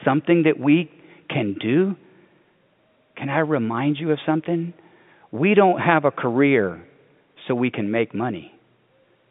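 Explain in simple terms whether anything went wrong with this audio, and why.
Nothing went wrong here.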